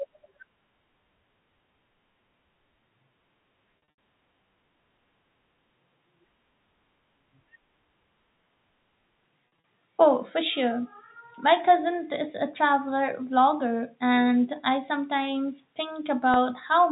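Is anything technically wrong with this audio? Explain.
Yes. At 3.84 to 3.90 s, 9.60 s and 16.34 to 16.36 s the speech briefly holds on a buzzy repeated tone. This is packet loss with pitch repetition: the receiver repeats the last pitch period to fill the lost audio.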